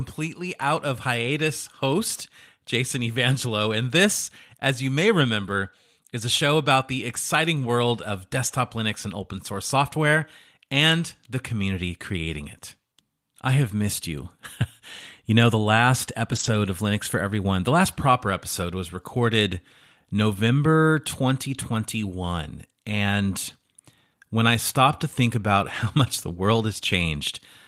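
At 16.31 to 16.53 s a short stretch of the speech turns rougher and noisier with no break in the sound, the mark of a lost packet rebuilt from error correction. About 120 ms was replayed from low-bitrate backup copies carried in later packets, which fits six 20 ms packets. Unlike plain loss concealment, nothing drops out or smears into a buzzy guess.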